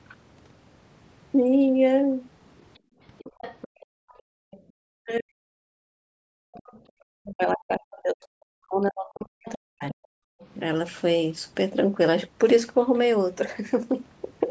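Other side's voice leaking through, 2.6 to 4.62 s: a second voice sits roughly 20 dB under the talker, likely loudspeaker echo the canceller failed to remove. Background gated by the echo canceller, 2.79 to 4.51 s: the room sound drops out by up to about 40 dB for around a second in total as the canceller clamps the microphone during playback. Speech suppressed in double talk, 4.79 to 5.71 s: the talker's voice dips deeply for most of a second, likely because both sides spoke at once and the canceller muted its own talker along with the echo. The background is gated again from 5.99 to 6.95 s, about 40 dB down for under a second, and the leaking voice returns faintly, around 25 dB below the speech, from 6.53 to 6.81 s. The talker is suppressed once more, likely in double talk, from 7.23 to 9.98 s, losing level for roughly three seconds. Leakage recurs from 9.46 to 10.47 s at a similarly low level, and a brief background gate of about 40 dB cuts the room sound for a moment between 10.26 and 10.4 s.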